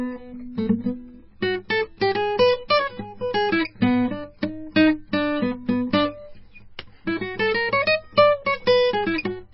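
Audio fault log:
Throughout: MP3 compression, heavy. There's nothing at all above 5.6 kHz, so the music sounds dull and boxed-in, and what's left has a watery, swirly shimmer with smeared attacks. That's likely an MP3 encoder starved of bits, which fits something around 18 kbps: it chops the treble at a fixed point and drops weaker frequency lines that flicker in and out from frame to frame.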